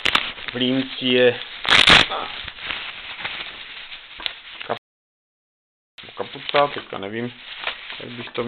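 At 4.77 s the sound cuts off in mid-flow and stays silent for about 1.2 s, picking up again at 5.98 s: a playback stall. The player was likely starved of data or its thread blocked. A waveform shows a flat gap there, and a spectrogram shows a blank vertical band with hard edges.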